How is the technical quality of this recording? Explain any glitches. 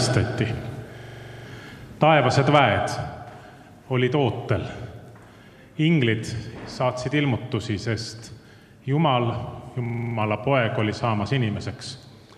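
The recording has two glitches of the same kind. System hang loops occur from 0.98 to 1.45 s and from 9.86 to 10.16 s. Each time, the system briefly froze while the audio hardware kept replaying one 43 ms stretch of its ring buffer, which fits a 2048-sample buffer. That stretch repeats 11 and then 7 times at 23.4 Hz, producing a rapid, machine-gun-like stutter.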